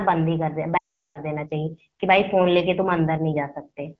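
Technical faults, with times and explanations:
0.77–1.19 s, lost AMR speech frames: the speech drops to near silence within two frames, then returns rough. Corrupted frames failed their checks, so the AMR-WB decoder repeated the last good pitch and vocal tract settings with falling gain, a 380 ms gap.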